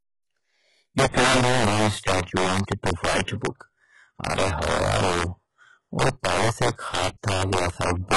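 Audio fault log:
throughout: integer overflow. Loud peaks crack sharply as samples pushed about 9 dB past the integer limit wrap to the opposite sign, affecting a few percent of samples.
throughout: HE-AAC compression. Heavy codec damage leaves gritty, metallic treble with nothing above 11.5 kHz, likely from band replication rebuilding highs at a low bitrate near 12 kbps.
2.21 to 2.27 s and 3.23 to 3.28 s: pre-echo. A short hiss of 55 and 52 ms precedes each attack, as block-wide quantisation noise fills the quiet moment before it.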